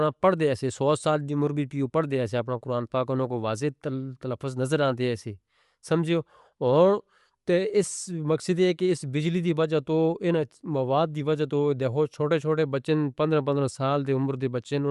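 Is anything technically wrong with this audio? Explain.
Yes. Throughout the speech, the sound is band-limited, with nothing above 11.5 kHz, and the codec damage is plainly audible. The voice has a breathy, grainy edge. The likely cause is Bluetooth LC3 compression, the transform codec of LE Audio. It splits the signal into short frames, which here fits 10 ms frames, and it spends a limited bit budget on them, consistent with a rate near 48 kbps. The upper spectrum is cut away, and what remains is coarsely coded.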